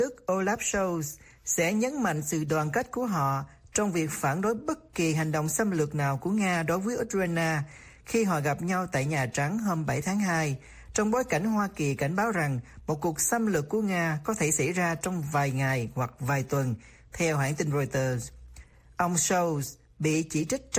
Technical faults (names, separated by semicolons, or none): none